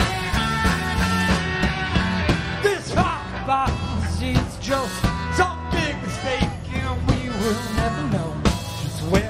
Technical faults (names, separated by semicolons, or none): none